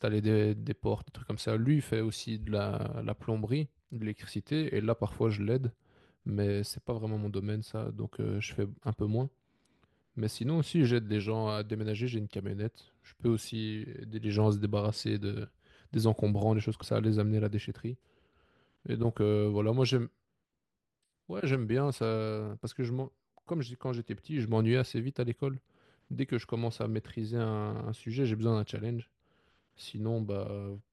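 At 16.82 s the speech jumps forward: compressed frames skipped, about three 32 ms frames, losing roughly a tenth of a second.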